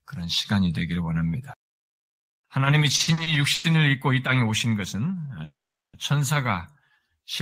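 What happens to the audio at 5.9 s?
At 5.9 s the sound is in a call audio freeze from 5.44 to 5.95 s: a short fading tail, then about 0.41 s of silence, likely from delayed packets. Playback then resumes where it stopped.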